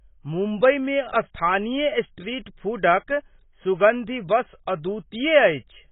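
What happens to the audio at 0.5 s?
At 0.5 s the speech sits inside heavy AAC compression that runs through the whole clip rather than starting there. Nothing remains above 3.8 kHz, so the sound is dull, and sibilants and sustained sounds smear into a warbling, fizzy texture. The likely cause is AAC-LC coding at a very low bitrate, which fits a rate around 16 kbps. The coarse quantising gaps and fills the spectrum frame by frame. A plain low-pass filter would cut the top just as hard but would leave the remaining band clean, without this churning texture.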